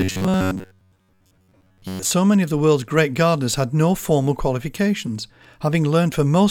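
From about 0.01 s to 2.11 s, just before "many of the world's", the speech has the robotic sound of repeated short buffers. The likely cause is audio arriving too seldom, so playback keeps repeating a slice of roughly 10.7 ms for most of that stretch while the real signal is skipped. This sets a rigid, metallic buzz at 93.8 Hz over the speech. Unlike dropouts, there are no silent gaps.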